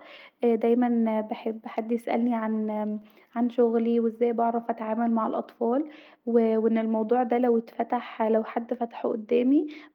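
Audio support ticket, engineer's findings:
Clock drift between sender and receiver, whole clip. Sender clock runs roughly 2% slow against the receiver, so the jitter buffer keeps draining toward empty. Receiver compensates by stretching playout, so the speech comes out at about 98% speed. Audible as a faintly dragged, unsteady pace.

Repeated timing corrections, 0.31 to 9.62 s. Receiver-side buffer management repeats short pieces, all in the same direction and at uneven spacing, to stay in step with the slow sender. Together they add a fifth of a second or so. Heard as slight hiccups and a faltering tempo across the speech.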